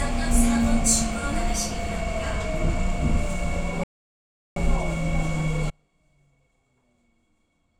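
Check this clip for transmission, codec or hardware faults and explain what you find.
Two faults are present, a playback stall and a dropout that runs to the end.

From 3.84 to 4.56 s, a playback stall cuts the sound dead for about 0.73 s before it resumes. The player likely ran short of data or had its thread blocked. The waveform shows a flat line, and the spectrogram shows a fully blank vertical band.

At 5.70 s, an audio dropout to a faint residue begins and lasts until the clip ends. The wanted signal likely vanished upstream while the path downstream stayed live. A faint trace remains roughly 35 dB below normal. The waveform collapses abruptly to a thin sliver, and the spectrogram drops to a dim wash.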